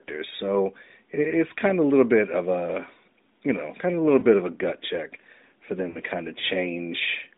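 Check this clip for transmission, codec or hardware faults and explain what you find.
Two lost AMR speech frames events break up the speech. At 4.20 to 4.25 s, between "kind of a little" and "of a gut check", there is a brief dip or warble. At 5.90 to 5.98 s, between "a gut check for" and "kind of", a longer smeared, fading stretch follows. Radio errors corrupted the frames, and the decoder filled the gaps by repeating the last good pitch and vocal tract settings at falling gain: one 20 ms frame first, then two frames, 40 ms, which explains the more drawn-out second event. This sits within narrowband phone audio running from about 250 Hz to 3.7 kHz, with light coding roughness that fits AMR-NB's 12.2 kbps mode.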